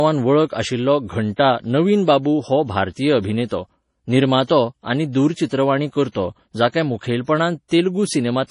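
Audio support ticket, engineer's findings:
Watery, swirling texture on speech throughout, with chirpy sibilants and smeared onsets; no content above 10.6 kHz. Likely MP3 compression, heavily starved, which fits a bitrate near 32 kbps: treble cut at a fixed frequency, weak spectral lines dropping in and out between frames.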